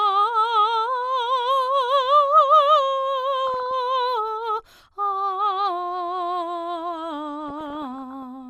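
DAB burbling appears twice in the music, first from 3.47 to 3.71 s and again, longer, from 7.44 to 8.23 s. Under weak reception, bit errors at a rate of around 0.5 and 0.4 percent respectively slip past the error correction into the MP2 audio data. Corrupted samples put short blips of noise into single sub-bands, and corrupted scale factors make sub-bands jump in level for up to a frame. The result is burbling laid over the music.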